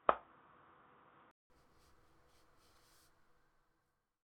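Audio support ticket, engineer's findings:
0.0–1.5 s dull and boxy, nothing above 3.8 kHz, ~0.19 s gap, then it opens up. Likely input switched to a poorer device: narrow-band mic.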